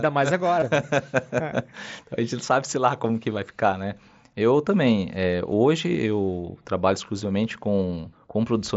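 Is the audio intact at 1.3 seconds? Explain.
Yes, at 1.3 seconds the speech is intact, with no fault at that moment beyond the light, normal character of the mSBC Bluetooth headset codec carrying it.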